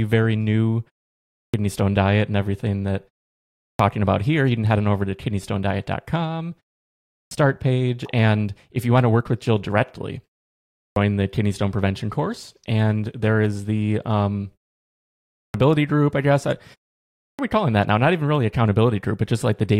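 Six times in this speech, the output returns from a short pause and drops the start of what follows: a clipped start after a pause at 1.17, 3.47, 6.98, 10.58, 15.21 and 17.0 s, each losing about 320 to 390 ms. The device has idled through silences of 0.33 to 0.72 s and needs that long to resume. On a waveform, speech begins abruptly at full level, with its opening energy missing on the spectrogram.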